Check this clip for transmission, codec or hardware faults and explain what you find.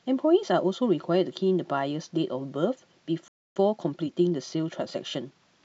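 Two playback faults are audible, one feeding the other.

At 3.28 s the speech cuts out for about 0.28 s, until 3.56 s. This is a playback stall. The player likely ran short of data or had its output thread blocked. The sound simply goes silent mid-flow, then resumes.

From 3.56 s to 5.42 s there is time-compressed catch-up. The player trims its backlog by removing short slices and cross-fading the joins. Delivery runs about 1.15 times fast at unchanged pitch.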